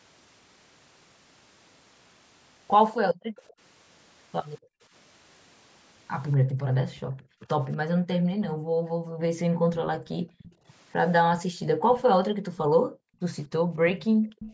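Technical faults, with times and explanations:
2.98–3.37 s, 4.6–4.82 s and 6.38–14.39 s, background gated by the echo canceller: the room sound ducks by about 40 dB, and in the last span it drops out for roughly four seconds in total. The canceller is turning the microphone down hard while the far side's loudspeaker plays.
3.4–3.54 s, 6.32–6.37 s, 7.44–8.48 s, 9.73–12.02 s and 13.98–14.53 s, echo leak: a copy of the speech trails it by 242 ms, at about 30 dB down at first and about 15 dB down from 9.73 s. This is likely loudspeaker pickup that the echo canceller failed to remove and sent back.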